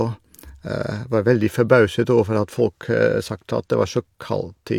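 No technical faults can be heard anywhere in the speech recording, and the signal holds up without interruption throughout.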